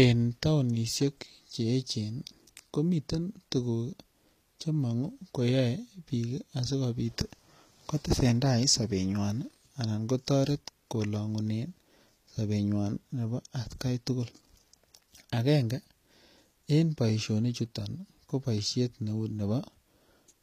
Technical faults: HE-AAC compression

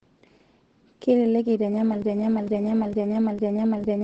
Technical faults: Opus voice compression; broken-record loop

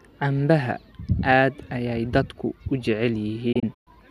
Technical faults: digital broadcast dropout

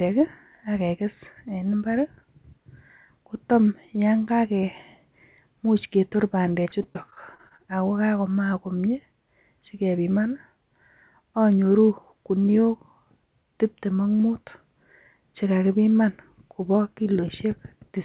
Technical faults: repeated packet loss (robotic sound)

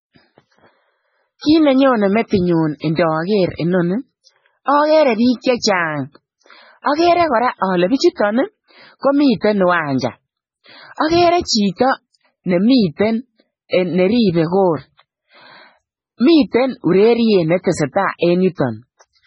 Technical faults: MP3 compression

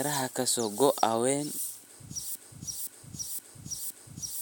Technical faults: broken-record loop

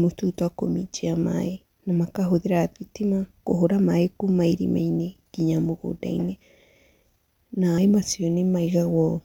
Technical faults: damaged data in a compressed stream

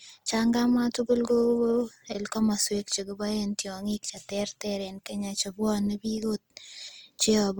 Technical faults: Opus compression

